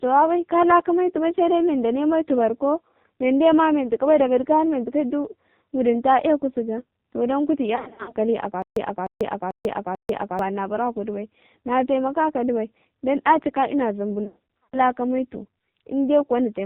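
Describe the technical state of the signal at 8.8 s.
At 8.8 s the playback has likely stalled and is retrying, producing a stutter with silent gaps from 8.62 to 10.39 s. A roughly 0.3 s fragment repeats four times, each followed by about 0.14 s of digital silence, a 0.44 s cycle, and the audio meant for that span is lost.

Underneath, the speech has passed through the AMR narrowband mobile codec. Its 8 kHz sampling removes everything above 4 kHz, and its sparse pulse-driven vocal-tract model leaves the voice heavily buzzy and synthetic, which points to one of its lowest modes, around 5.9 kbps.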